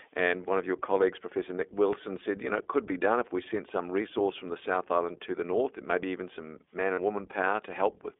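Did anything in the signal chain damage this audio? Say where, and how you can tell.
Yes. At the codec stage, the whole clip has passed through the iLBC codec. The speech is confined to a telephone band of roughly 300 Hz to 3.6 kHz, with nothing above that, and it has a plainly audible rough, synthetic edge. iLBC codes each frame's excitation on its own, without relying on the previous frame, and the coarseness fits its 15.2 kbps mode with 20 ms frames. The narrow band comes from the codec's narrowband design, and the rough texture from that low-rate excitation coding.

At the network stage, there are lost iLBC frames from 6.94 to 7.00 s. For about 40 ms the speech is replaced by a held, slightly buzzy or breathy vowel-like sound, which points to two dropped 20 ms frames. The decoder concealed the gap by repeating the last pitch cycle mixed with noise. Because iLBC frames decode independently, the speech returns to normal almost immediately after the gap, with no smeared recovery.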